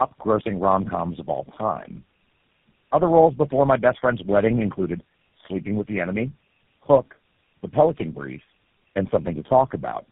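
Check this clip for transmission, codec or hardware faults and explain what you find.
One fault runs through the whole clip: tandem speech coding. The speech was decoded and coded again by about four low-rate coders in a row, which fits alternating G.729A and GSM full rate stages. Each stage compounded the previous one's damage, leaving speech rough, muffled and warbly. On a spectrogram, energy stops sharply near 3.7 kHz, with smeared, blurred harmonics.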